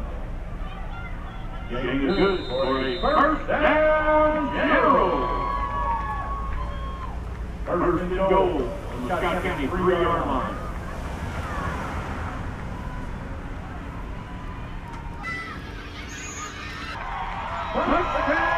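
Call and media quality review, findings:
Section at the wrong speed, 15.23–16.95 s. Likely a playback or edit stage clocking this segment against the wrong rate, running it at 1.65x. Sound jumps abruptly higher and hurried, pitch up close to ten semitones, then returns to normal speed at the section's end.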